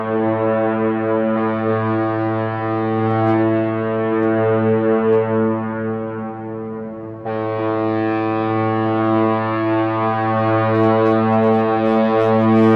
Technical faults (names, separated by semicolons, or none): hard clipping